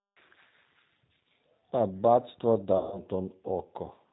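Throughout, the speech has the rough, slightly synthetic quality of the G.729 codec, plainly audible and consistent with its 8 kbit/s mode. Each 10 ms frame is rebuilt from a vocal tract filter, pitch predictor and a few pulses, with nothing above 4 kHz. This leaves a dull, rough texture rather than the smeared, watery sound of a transform codec.

From 2.77 to 3.00 s, VoIP packet loss concealed by the speech codec takes over. About 150 ms of audio went missing, which fits a run of around five packets. The decoder extended its last pitch and filter and faded the gain, so the sound stretches into a buzzy tone or coloured noise that dies away instead of dropping to silence. The speech stays weak briefly after packets resume.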